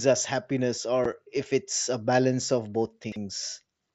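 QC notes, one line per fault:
1.05 s, unconcealed Bluetooth headset packet loss: A hole of about 7.5 ms opens between "us happiness" and "if it's a balance". The gap fits a single lost packet on the mSBC headset link. Silence or an idle pattern fills it with no concealment, leaving a short hole with hard edges.
3.04 to 3.16 s, chunks out of order: A 40 ms chunk arrives two chunks late and plays after the audio that should follow it. Nothing is missing, but the sequence is scrambled. Three abrupt joins make this moment sound jumbled.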